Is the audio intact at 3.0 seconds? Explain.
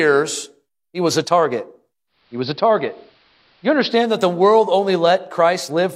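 No. From 2.06 to 4.19 s, after "he was a target", the speech turns dull with faint hiss, about 1 dB quieter. This is digital radio blending to analogue: a 290 ms cross-fade to the AM broadcast, reversed before "the world only".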